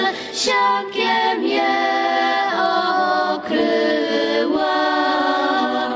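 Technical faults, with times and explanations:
Throughout, gain pumping: the level rises and falls by roughly 10 dB in step with the louder moments. Loud and quiet passages sit unnaturally close together and the whole clip sounds squashed. The likely cause is input gain set far too high, with a fast limiter or compressor clamping down on each peak. The audio passed through call microphone processing, with nothing above 8 kHz.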